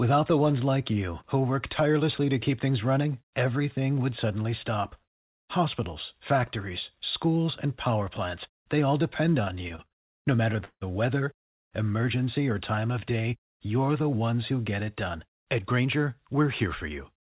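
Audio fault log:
9.42–10.83 s, repeated stalls (stutter): The speech halts thirteen times in under a second and a half. Each halt is filled by stretching the last sound, with the longest lasting 163 ms. About 412 ms of fill makes up roughly 29% of the span. Nothing is lost, but the flow drags and judders. Packets kept reaching the receiver late, so its jitter buffer ran dry again and again, and it covered each wait by continuing the sound.
11.39–11.69 s, call audio freeze: Just before "emergency or", the speech stops dead for 278 ms, and about 270 ms of that is silence. The speech then resumes exactly where it left off, so the gap is inserted and nothing is skipped. The likely cause is packets held up in transit, which left the jitter buffer empty. The receiver's brief continuation faded out almost at once, which is why the gap sounds like a hole rather than a buzz.
12.76–13.23 s, jitter buffer slow-down: Between "weather emergency or" and "you're the ones who", the speech runs at about 86% speed while the pitch stays the same. 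Sounds are drawn out. About 72 ms was added. The receiver was rebuilding a reserve because its buffer was running low. It did this by repeating single pitch periods many times in a row, which lengthens the sound without lowering it.
15.15–17.17 s, jitter buffer speed-up: After "ones who get it", the speech runs about 5% fast at unchanged pitch and sounds slightly hurried. Roughly a tenth of a second is trimmed out across two seconds. The jitter buffer was holding more audio than it aimed for, so the receiver cut short pieces of a pitch period or so, over and over, to bring the delay down. The band stops at 4 kHz throughout, which fits a narrowband G.711 call path.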